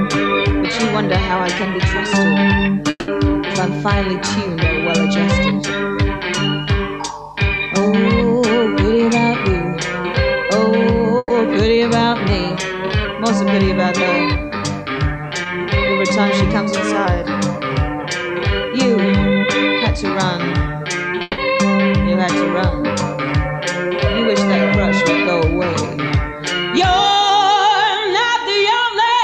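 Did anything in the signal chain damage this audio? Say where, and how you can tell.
Yes. The buffer stage shows a drift correction step at 1.57–2.12 s, 12.29–13.05 s and 16.50–17.05 s. Speed rises 6.2% and pitch about 104 cents, roughly a semitone, then snaps back. This is likely a clock-matching resampler jumping rate to rebalance its buffer.

The network stage shows a long network dropout at 2.90–3.10 s and 21.22–21.40 s. The last sound is stretched into a fading buzz or hiss for 180 ms and 160 ms, then goes silent briefly. Audio resumes further on, likely after a stalled stream whose lost span was never played.

A burst of packet loss at 11.18–11.32 s also comes from the network. About 120 ms of concealment extends and fades the preceding sound, followed by roughly 20 ms of silence. Playback then resumes past the missing stretch because consecutive packets never arrived in time.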